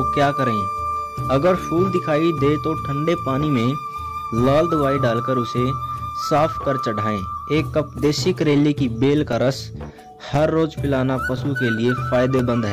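From 9.33 s to 12.40 s, regular ticks recur every 1.02 s: periodic USB or driver dropouts, each roughly 4 ms of audio replaced by silence.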